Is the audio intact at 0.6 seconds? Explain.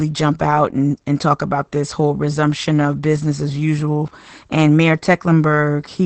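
No, not really. At 0.6 s, as across the whole clip, there's plainly audible Opus voice compression: SILK linear prediction at what sounds like roughly 12 kbps, band cut at 8.4 kHz, and coarsely coded excitation, so the speech comes across muffled and hoarse.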